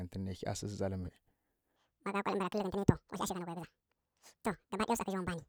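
From 1.76 s to the end, a section at the wrong speed: the speech runs 1.89 times too fast, pitched up roughly ten semitones, likely from a wrong clock.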